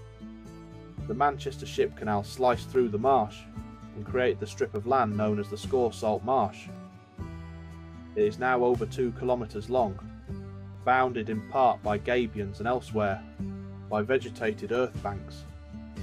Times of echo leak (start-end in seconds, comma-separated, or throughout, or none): none